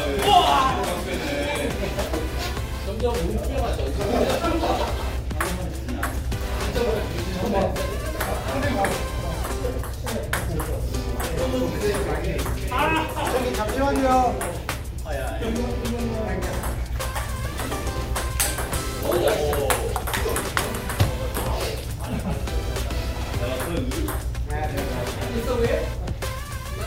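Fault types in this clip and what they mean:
No fault types are present in this clip, so there is nothing to list or explain here.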